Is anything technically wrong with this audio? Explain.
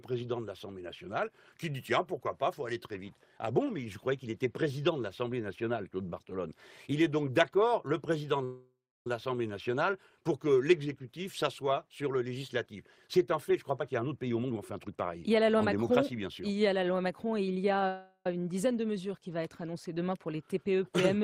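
Yes, there are two kinds of fault.

A call audio freeze occurs from 8.44 to 9.07 s and again from 17.88 to 18.26 s. Packets were likely delayed in transit, leaving the receiver's jitter buffer empty. It extended the last sound as a decaying buzz or hiss: about 0.61 s in the first case, ending in roughly 0.31 s of silence, and about 0.38 s in the second, with only 70 ms of silence. Nothing is lost; the audio resumes where it stopped, so each event adds its own length to the delay. On a spectrogram each shows as smeared, fading bands ending in a blank strip, and the waveform tapers to flat.

A jitter buffer speed-up runs from 13.33 to 17.80 s. The buffer had overfilled, so the receiver repeatedly cut out short pitch-period slices, playing about 13% fast and trimming roughly half a second overall. Pitch is unchanged but the sound feels hurried. On a spectrogram the harmonics stay at the same height while events are packed closer in time; the waveform shows tiny splices between cycles.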